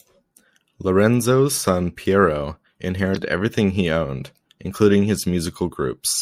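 A brief glitch at 3.12 to 3.17 s, just before "everything he owned including", is damaged data in the compressed stream: the decoder lost sync and skipped to the next frame header.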